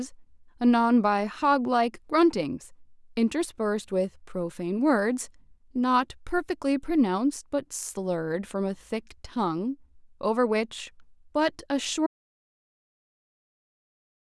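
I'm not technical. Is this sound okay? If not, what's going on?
No, not quite. At about 12.07 s the speech cuts off mid-flow and the rest is dead silence, with no room sound at all, right to the end. That's an audio dropout to silence, likely a disconnected mic or a stray mute while recording carried on.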